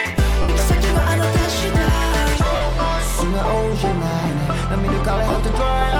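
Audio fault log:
0.42–0.49 s, 2.56–2.61 s, 5.29–5.36 s, lost LE Audio frames: missing frames are filled by repeating the last spectrum with random signs, so tones smear into noise. On a spectrogram, crisp harmonic lines blur into a grainy band. The third gap is broken up, with its longest stretch about 30 ms.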